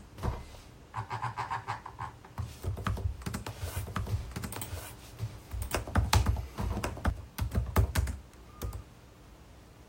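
From 3.76 s to 7.10 s you get a doubled audio track. A second, full-band copy of the sound runs roughly a second behind the original, at about the same level, so everything plays twice and overlaps with itself. There's no decay or room colour on the copy, which rules out an echo, and it cuts in and out abruptly at both ends. Most likely a second capture path or an edit left two copies out of step.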